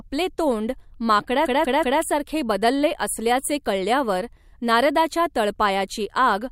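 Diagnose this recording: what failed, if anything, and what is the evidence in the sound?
A stutter at 1.47 to 2.02 s: a block of about 0.19 s plays three extra times, just before "बदलले असल्याचे कळल्यावर नारदाच्या". These are repeated frames at the codec or storage stage, a run of compressed data, fitting two frames, rewritten and decoded again, adding about 0.56 s.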